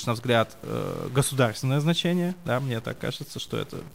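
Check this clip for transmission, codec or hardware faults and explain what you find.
A stuck bit affects the entire speech clip from start to finish. Across all of it there is added distortion, and the pauses fill with noise, from an error step of roughly -45 dBFS. This is likely one converter or data line held at a fixed value, shifting about half the samples by that bit's weight. Unlike plain bit-depth reduction, the noise persists in silence because the error follows sign changes of tiny values.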